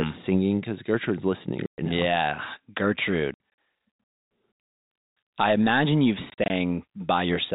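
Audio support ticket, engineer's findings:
Packet loss filled with silence, three events. 1.66 to 1.78 s: one solid 120 ms dropout. Around 3.34 to 3.39 s: 120 ms of gaps scattered across 240 ms, longest run 60 ms. 6.3 to 6.5 s: 100 ms lost in bursts over 200 ms, longest 40 ms. Waveform shows flat silent blocks with vertical edges; spectrogram shows blank columns with hard edges. Gap lengths fit 20 ms packets. Receiver jitter buffer/concealment not filling losses. Sub-4 kHz G.711 band visible outside holes.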